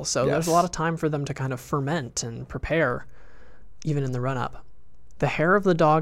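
At 2.90 s the speech carries a DC step: the waveform's zero line jumps to a fixed offset of about -37 dBFS and stays there until the clip ends. The step comes from a sudden shift in the signal's baseline, as when a converter recalibrates or an input with an offset is switched in. It is heard as a single low thump at that moment, while the speech continues unchanged on top of the displaced baseline.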